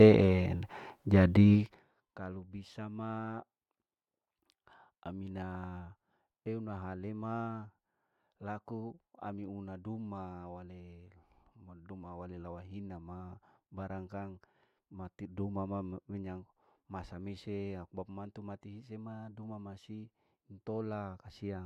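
From 1.53 to 1.93 s, zipper noise: the level drops about 25 dB in 1 dB steps at roughly 70 per second, ticking audibly, with a staircase envelope and faint vertical lines on a spectrogram.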